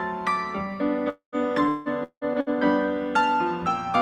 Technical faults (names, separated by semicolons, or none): long network dropout; repeated packet loss (robotic sound)